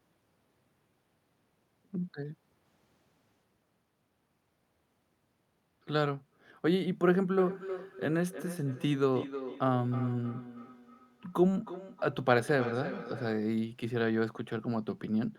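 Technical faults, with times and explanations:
7.38 to 13.43 s, feedback echo between two devices: speech returns roughly every third of a second, thinner and ringing, peaking about 11 dB below the talker, unlike single room echo.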